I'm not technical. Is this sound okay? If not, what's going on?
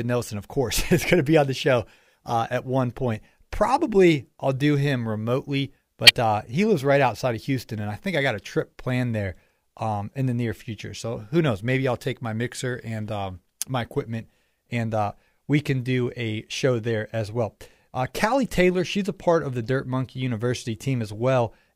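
No. A few compressed chunks of the speech were damaged, and the player played them anyway: a corrupt frame decoded. Each damaged chunk puts sound at the wrong pitches, giving a brief chirp or blip at 6.06–6.10 s (loud), 16.73–16.92 s, and 18.07–18.10 s (faint).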